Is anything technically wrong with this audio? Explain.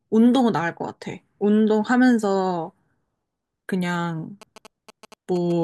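Yes. From 4.42 s to 5.52 s the speech picks up GSM signalling bursts: a galloping dit-dit-dit of short buzzes at a 217 Hz repetition rate, sitting roughly 20 dB below the speech. A nearby 2G phone in a signalling state is sending brief clusters of radio bursts. Some part of the audio circuit rectifies that RF energy and demodulates the burst envelope into the audible buzz pattern.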